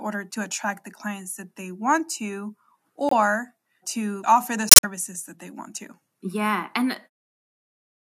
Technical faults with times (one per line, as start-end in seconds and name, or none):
3.09-3.13 corrupt frame muted
4.69-4.84 corrupt frame muted